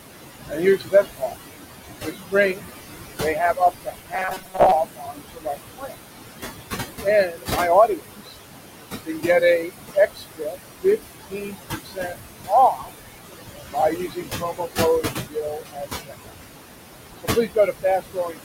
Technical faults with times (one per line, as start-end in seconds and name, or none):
0.00-18.44 noise suppressor artifacts
0.49-1.34 speech cut by the noise suppressor
2.02-2.63 speech cut by the noise suppressor
3.21-5.96 speech cut by the noise suppressor
4.14-4.72 robotic sound from repeated short buffers
7.03-8.36 speech cut by the noise suppressor
9.06-12.15 speech cut by the noise suppressor
12.47-12.90 speech cut by the noise suppressor
13.73-16.32 speech cut by the noise suppressor
17.19-18.40 speech cut by the noise suppressor